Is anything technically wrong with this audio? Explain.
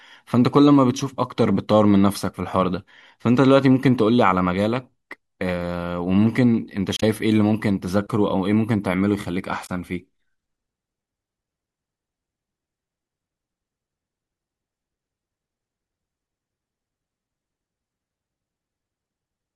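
Yes. Two bursts of damaged data in a compressed stream occur, at 6.96 to 7.03 s and 9.65 to 9.70 s. Corrupted bytes make the decoder misread frames and lose sync until it finds a valid header. Each is heard as a short chirp, squawk, click or hole breaking the speech.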